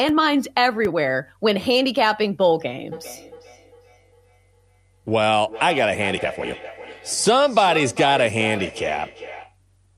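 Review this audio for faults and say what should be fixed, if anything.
There's feedback echo between two devices from 2.92 to 9.57 s: the speech comes back roughly every 400 ms, peaking about 14 dB below the talker. A second device in the room is replaying this mic's audio, and the echo canceller can't remove sound it didn't play. Mute or remove the extra device, or have everyone in that room wear headphones.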